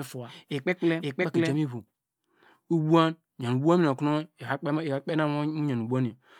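Speech, with a doubled audio track from the start until 1.56 s: a second full-band copy trails about half a second behind at roughly equal level, with no decay, then stops abruptly. The likely cause is a slower second capture path.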